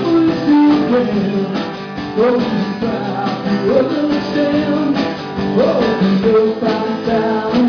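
Aliasing runs through the whole clip. The audio appears to have been resampled down to about 11 kHz without an anti-aliasing filter first, which fits a conversion from 48 kHz. Content that sat above the new folding point at 5.5 kHz was mirrored back below it onto unrelated frequencies rather than being removed. The folded energy sits roughly 20 dB under the main signal, enough to give high-frequency detail a gritty, metallic edge, and the spectrum stays dense right up to 5.5 kHz.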